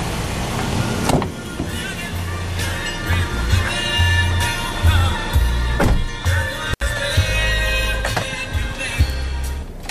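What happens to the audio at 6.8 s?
An intermittent contact fault occurs from 6.73 to 6.82 s. A loose connection in the cable or plug briefly loses contact, so the signal path opens for about 76 ms before the contact closes again. Across that span the sound cuts out abruptly, with a burst of crackle where the contact breaks and remakes, and only a faint hiss remains while the line is open, until the audio snaps back in.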